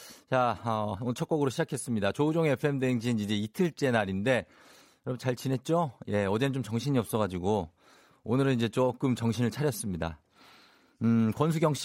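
Speech recording with no audible technical faults anywhere in the clip.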